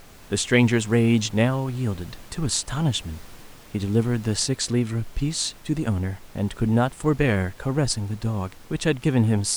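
No technical faults are audible.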